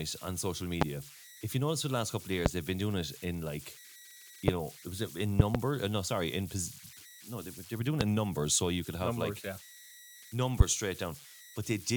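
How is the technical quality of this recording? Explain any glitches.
Technical quality is compromised by two problems: converter idle tones throughout the speech, and a series of loud pops.

Converter idle tones run the whole length: an undithered delta-sigma converter cycles through repeating bit patterns on quiet input, leaving a faint whistle near 2 kHz, about 20 dB below the speech.

Loud pops occur at 0.82–0.84 s, 2.46–2.49 s, 5.40–5.57 s (two in quick succession) and 8.01–8.04 s. Each is a sharp spike about 25 dB above the speech, likely a voltage step from a switch, plug or static discharge.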